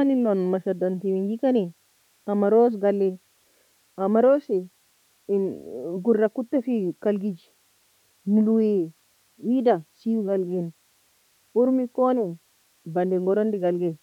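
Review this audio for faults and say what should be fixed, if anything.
Nothing stood out on listening to the speech, so there is nothing to fix.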